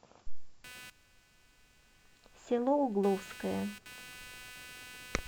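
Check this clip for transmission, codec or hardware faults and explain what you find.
There's one hardware fault, and it runs from 0.64 s to the end of the speech. It's computer activity noise: a buzzy, chirping whine pulsing at roughly 300 Hz, sitting about 20 dB under the speech. The processor or graphics load is shifting the shared ground under the audio circuit, so the noise follows the machine's activity rather than the talking.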